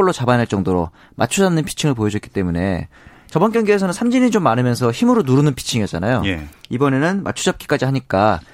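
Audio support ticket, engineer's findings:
Nothing to flag on this speech recording, so no findings to log.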